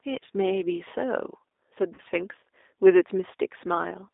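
From the start and throughout, the speech carries the sound of the G.729 codec. It is confined to a telephone band of about 300 Hz to 3.7 kHz and sounds plainly rough and slightly synthetic, which fits an 8 kbit/s G.729A stream. The codec rebuilds each short frame from a vocal tract filter, a pitch predictor and a few pulses. That model gives the rough, artificial texture, which sets it apart from simple band-limiting, where the sound is muffled but clean.

From 1.94 to 2.01 s there is VoIP packet loss concealed by the speech codec. About 40 ms of audio went missing, which fits two lost 20 ms packets. The decoder filled the gap by extending its last pitch and filter settings while lowering the gain, so the sound smears into a fading buzzy tone or coloured noise rather than dropping to silence. Because each frame builds on the one before, the speech stays weakened and distorted for a short while after 2.01 s. 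That lingering damage distinguishes this from a plain dropout or a click.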